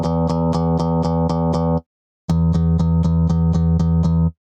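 Gain pumping runs through the whole clip. The gain swells in each gap, then ducks by roughly 15 dB under every loud sound. A fast limiter likely causes this.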